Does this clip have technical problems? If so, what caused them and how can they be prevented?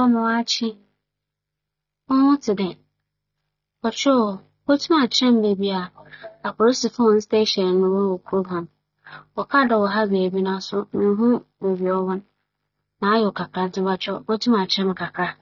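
Yes. AAC compression runs throughout, with nothing above 6.9 kHz and a dull, warbling texture, likely from AAC-LC encoding at a bitrate that points to about 24 kbps. To prevent it, encode at 96 kbps or higher, or keep an uncompressed master.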